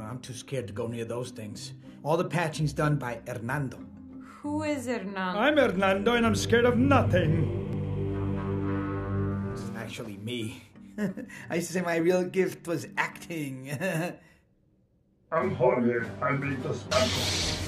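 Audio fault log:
No technical faults can be heard anywhere in the audio, and the signal holds steady with no disruptions or audible defects.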